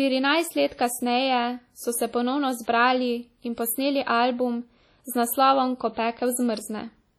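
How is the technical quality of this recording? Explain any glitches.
Technical quality is poor, with heavy codec damage across the whole clip.

Throughout, the speech sounds ringing and washy, with hiss that swells and fades with the signal. This is likely WMA compression. Long transform blocks smear quantisation noise over tens of milliseconds, and the damage fits roughly 32 kbps. A spectrogram shows patchy gaps where weak components vanish, with smeared energy around onsets.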